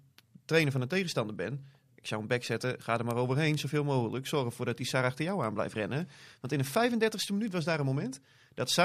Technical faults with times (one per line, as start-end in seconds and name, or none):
0.20-8.78 word clock ticks